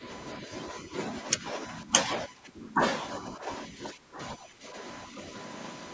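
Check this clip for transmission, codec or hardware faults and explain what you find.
Two faults are audible in this speech. One is a steady tone, and the other is a series of level dips.

USB whine runs throughout. It is a fixed 1 kHz tone about 15 dB below the speech. USB's 1 ms frame timing leaks in through power or ground.

The speech dips six times, at 0.47–0.93, 1.39–1.44, 1.82–1.93, 2.28–2.8, 3.36–4.77 and 5.08–5.19 s. The drops are about 5 to 15 dB. The likely cause is speech suppressed in double talk. An echo canceller turned the talker down while the far side spoke.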